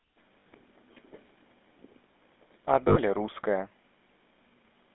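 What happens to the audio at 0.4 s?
At 0.40 to 0.46 s there are lost GSM frames. About 60 ms is missing, which fits three dropped 20 ms frames. The decoder repeats the last good frame, so the sound smears into a rough, metallic ring. Underneath, the GSM full-rate codec gives a buzzy, gravelly roughness. It keeps only a narrow phone band, roughly 250 Hz to 3.6 kHz.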